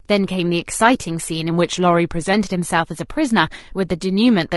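Drift correction step from 1.51 to 2.34 s: the speech slows by 6.1% and drops 109 cents, about a semitone, then snaps back, likely a clock-matching rate jump refilling a buffer. Low-delay AAC compression runs throughout, leaving the voice rough and grainy with noise between harmonics, likely AAC-ELD's short frames at a bitrate that fits around 32 kbps.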